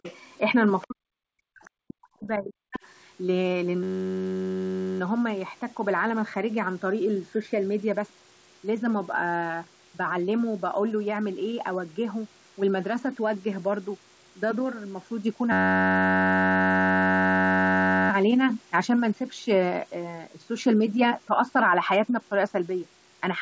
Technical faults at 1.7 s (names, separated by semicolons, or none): speech suppressed in double talk; other side's voice leaking through